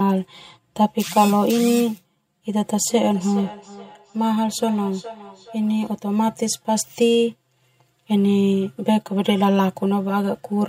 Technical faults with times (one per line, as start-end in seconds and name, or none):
0.00-10.68 channel delay (comb filtering)
2.86-5.98 feedback echo between two devices